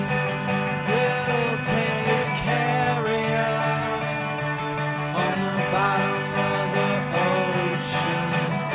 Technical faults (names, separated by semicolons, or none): none